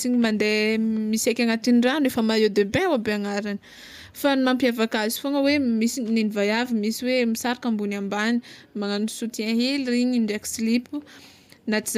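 No technical faults can be heard anywhere in the recording. Nothing in the signal path calls for comment at any point in the speech.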